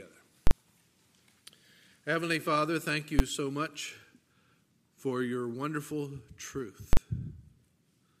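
A calculation produced invalid numbers at full scale, pinning the output to its extreme for 40 ms at 0.47 s and 6.93 s, and 10 ms at 3.19 s, heard as loud bangs in the audio.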